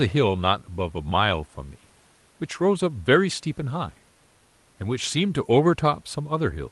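Nothing goes wrong anywhere in the clip. The speech sounds like ordinary call audio, with the top end easing off around 12 kHz as the codec's bandwidth allows and a soft room hush sitting about 40 dB underneath.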